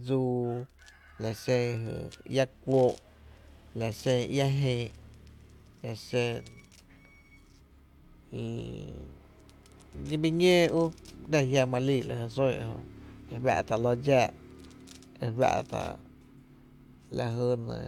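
No technical faults are audible anywhere in the speech recording.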